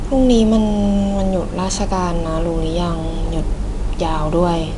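Speech encoded throughout with 4-bit ADPCM compression, fitting roughly 89 kbps: quantised prediction steps leave a plainly audible gritty hiss tracking every loud syllable, and nothing sounds above 10.6 kHz.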